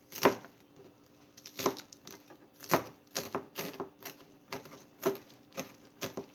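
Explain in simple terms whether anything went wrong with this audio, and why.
Nothing went wrong: the audio has no audible faults.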